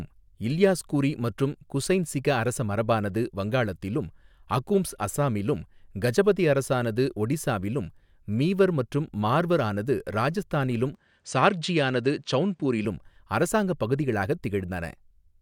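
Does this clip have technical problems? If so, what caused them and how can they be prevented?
Yes. From 10.95 to 12.85 s, right after "மற்றும் மார்வர் ஆனது ராஜஸ்தானிலும்", the speech dulls with nothing above 9.3 kHz, likely an input switched to a poorer device. Lock the recording input so the system can't hop devices mid-take.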